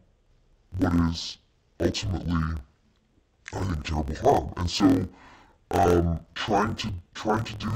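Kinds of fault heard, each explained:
Interleaved audio read as planar: the speech sounds an octave low, doubled and choppy, with a flutter at about 42 Hz. Each 24 ms block of alternating left-right samples was split into halves, so both channels play at half speed, together, restarting every block.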